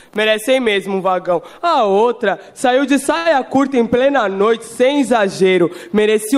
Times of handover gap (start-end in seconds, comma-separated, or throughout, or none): none